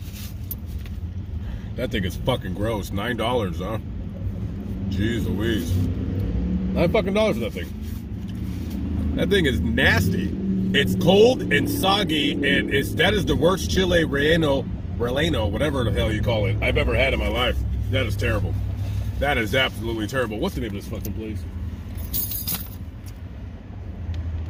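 Clock slip clicks run from 0.11 s to 24.48 s: faint, regular ticks about five times a second, roughly 150 of them in all. This steady pattern most likely comes from two devices on free-running clocks, one sample dropped or repeated each time their difference adds up to a full sample. The rate points to a clock mismatch of around 150 parts per million. The ticks stand out most where the sound is loud and bright or sustained.

An adaptive stream at a lower bitrate takes over from 10.60 s to 18.60 s, an eight-second stretch. Quality drops abruptly with no gap in the audio, and codec smearing grows more audible. This is the player falling back to a cheaper encoding when the connection slowed, which fits a switch from a 64 kbit/s Opus stream to one at 16 kbit/s. At 18.60 s the fuller sound returns just as suddenly.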